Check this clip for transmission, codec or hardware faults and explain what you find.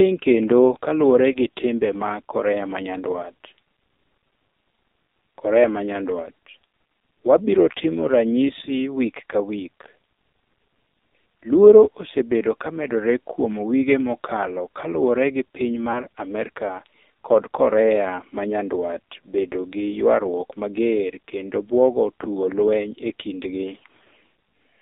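Two faults are present: heavy narrowband mobile codec damage across the whole clip, and two brief dropouts from lost speech frames.

AMR narrowband mobile codec, throughout: The speech passed through AMR-NB at a very low bitrate, consistent with about 5.9 kbps, and the line band runs only from 250 Hz to 3.7 kHz. The voice therefore sounds thin, buzzy and synthetic.

Lost AMR speech frames, at 1.32 to 1.37 s, after "kendo kaluore" and before "gi timbe mag", and at 15.92 to 16.01 s, after "mokalo kaluore gi piny": Radio errors corrupted a frame, consistent with a single lost 20 ms frame each time. The decoder filled the gap by repeating its last pitch and vocal tract settings at falling gain, which is heard as a short dip or warble.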